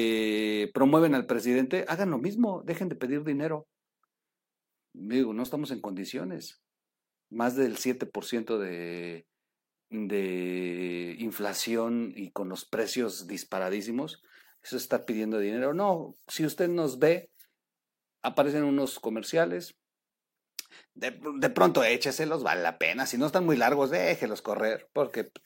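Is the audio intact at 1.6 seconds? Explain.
Yes, the speech at 1.6 seconds is intact, with no dropout, click, distortion or other fault at that moment.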